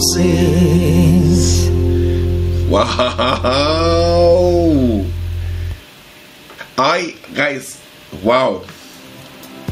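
Gain pumping runs throughout: the gain ducks by around 10 dB under each loud sound, likely from excessive input gain driving a fast limiter, unlike a gate's abrupt cut-off.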